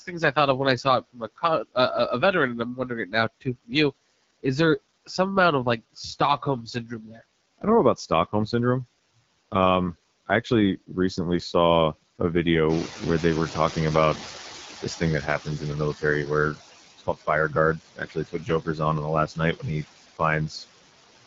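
Throughout the 21 seconds, two faults shape the whole sound. Noise suppressor artifacts come from a frame-by-frame gain that pulls steady background down by about 16 dB. The residue between phrases flutters and the speech has a thin, watery edge. On a spectrogram the noise floor looks mottled and patchy rather than even, with gaps opening and closing around the speech energy. The AMR wideband (HD Voice) codec damage is plainly audible: speech sounds rough and raspy, with a buzzy, grainy texture that fits one of the codec's lowest modes, 8.85 kbit/s. A spectrogram shows a hard ceiling with nothing above 7.5 kHz, and a diffuse, noise-filled band just beneath it instead of real harmonic detail.

Speech cut by the noise suppressor first appears between 0.00 and 1.76 s. The suppressor mistakes parts of the speech for noise, so soft consonants and word endings are swallowed, dropping by up to about 19 dB. 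It happens again between 2.75 and 3.72 s, between "a veteran and I'm" and "you is there some", dropping by up to about 20 dB. Each of these events totals a few tenths of a second of lost level. On the waveform, syllable tails collapse abruptly toward the floor.

The third cut runs from 5.95 to 8.53 s, just after "some amount of like", dropping by up to about 19 dB. Again the faint endings vanish with the background.

Right after "saw a", the room noise jumps by about 13 dB at around 12.5 s. This produces the noise suppressor catching up from 12.69 to 16.51 s. At first the louder background passes through with little reduction, then it sinks over about 3.8 s until it is cut by about 12 dB. A spectrogram shows a broadband band of noise that brightens suddenly and then fades gradually. Inside that stretch, from 14.35 to 16.03 s, speech is cut by up to about 14 dB over a brief total.

The final cut, from 16.98 to 20.65 s, is the heaviest. 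It drops speech by up to about 21 dB and removes roughly a second of material in total, so whole quiet phrases turn faint. On the waveform the envelope repeatedly dips far below its neighbours.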